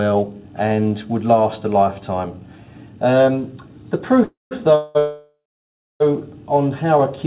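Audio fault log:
4.24 to 4.53 s, call audio freeze: packets likely stalled and emptied the jitter buffer; the last sound is stretched, fading to silence for 160 ms, then resumes intact.
4.75 to 4.97 s, call audio freeze: likely another late-packet stall; the sound is held as a fading buzz or hiss for about 200 ms with no silence, nothing lost.
4.99 to 6.02 s, call audio freeze: packets likely held up for about a second; the held sound decays and falls silent for 620 ms before resuming intact, with everything after delayed.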